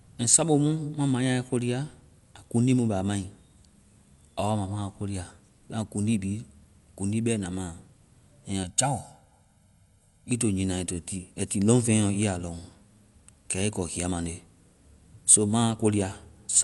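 Right from the start and all the way through, the speech sounds dull and a bit grainy. There's nothing above 11.5 kHz, and the codec damage is plainly audible: a rough, fluttery noise clings to the voiced parts. That's likely Dolby Digital compression at a low rate, which fits something like a 64 kbps stream. The encoder trims the top of the band and starves many frequency lines of bits, and the decoder papers over those gaps with noise.

Then from 8.63 to 10.31 s there's channel delay causing comb filtering. One channel lags the other by about a millisecond and a half, and when the two fold down to mono, the shared content cancels at evenly spaced frequencies, with the first notch somewhere around 400 Hz. For that stretch the speech goes hollow and phasey, as if heard through a tube, and then snaps back when the delay clears.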